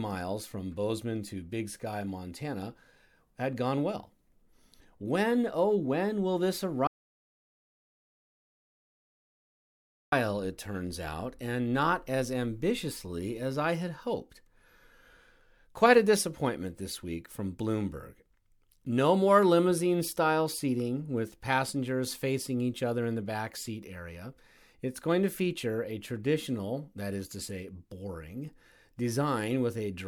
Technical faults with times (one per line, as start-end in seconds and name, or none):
6.87-10.12 audio dropout to silence